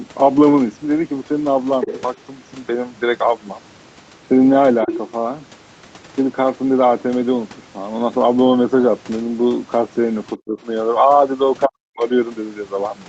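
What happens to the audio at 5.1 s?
From 4.9 to 5.11 s the other side's voice leaks through, likely loudspeaker echo the canceller missed, roughly 10 dB below the speech, appearing as faint overlapping harmonics on a spectrogram.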